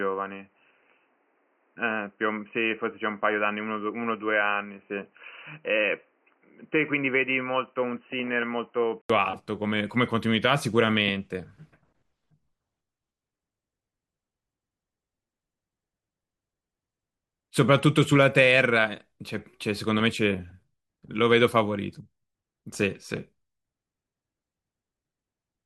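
From the start to 9.10 s the speech sounds dull and boxy, with nothing above 3 kHz, a touch quieter and carrying a faint, low noise floor. Then there's an 80 ms gap and the full bandwidth comes back. That's likely an input switched to a poorer device.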